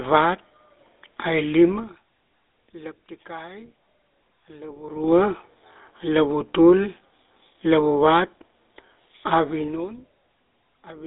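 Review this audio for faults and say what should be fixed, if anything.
GSM full-rate codec damage spans the whole clip: coarse pulse-excited coding leaves the speech buzzy and gravelly, and a spectrogram shows nothing above 3.8 kHz and little below 250 Hz. To prevent it, capture the audio at the source or over a wideband path instead of through a GSM full-rate phone leg.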